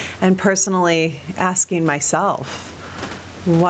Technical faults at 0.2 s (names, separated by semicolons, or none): gain pumping